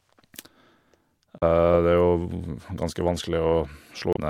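At 1.38 to 1.43 s and again at 4.13 to 4.17 s, damaged data in the compressed stream makes the decoder misread frames and resynchronise, producing brief glitches heard as a chirp, squawk, click or short hole.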